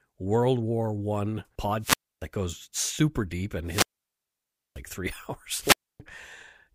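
At 1.8 s there's a wireless microphone squelch dropout: the FM radio link fades, hiss swells briefly, and the receiver's squelch mutes the output for about 0.28 s before "that goes super deep" comes back. Right after "that goes super deep", from 3.64 to 4.82 s, there's a longer one with a hole of roughly 0.94 s. The last, from 5.59 to 6.0 s, mutes for about 0.28 s again.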